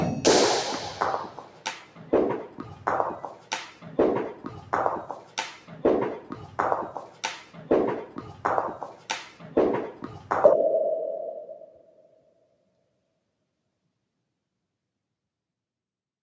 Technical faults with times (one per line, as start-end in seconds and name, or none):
0.00-16.23 noise suppressor applied to music or sounds
1.27-2.12 sound cut by the noise suppressor
3.35-3.51 sound cut by the noise suppressor
5.21-5.37 sound cut by the noise suppressor
7.08-7.60 sound cut by the noise suppressor
8.93-9.09 sound cut by the noise suppressor
11.63-12.80 sound cut by the noise suppressor